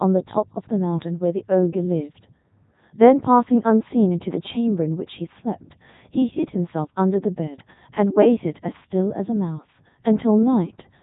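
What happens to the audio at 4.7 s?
At 4.7 s the speech is still under the Codec 2 vocoder, which runs through the whole clip. The damage is heavy. The voice is not carried as a waveform. Only pitch, voicing, energy and a spectral envelope survive, and the decoder rebuilds the sound from sine waves. That gives a robotic, buzzy tone. The sound suggests the top 3.2 kbit/s mode. Nothing is heard above 3.8 kHz.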